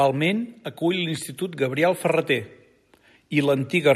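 From 0.79 s to 2.57 s the automatic gain rises by about 3 dB. The gain control judged the speech too quiet and turned itself up slowly. Voice and background noise swell together, which tells it apart from a speaker simply talking louder.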